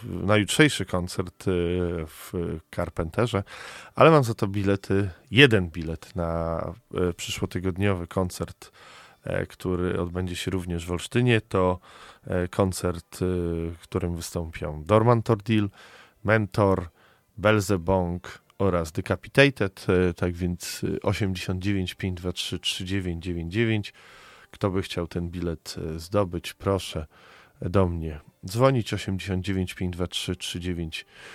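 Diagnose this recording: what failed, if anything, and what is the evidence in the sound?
Nothing failed; the recording shows no evidence in the sound of a fault at any stage.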